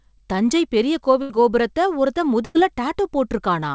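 A burst of packet loss left the receiver to stretch the last sound across the gap, first at 1.22–1.31 s after "தஞ்சை பெரிய", then at 2.45–2.57 s after "கோபுரத்தை ஒருத்தன்". Each time the sound holds, fades, then jumps ahead, skipping about 80 ms and 100 ms.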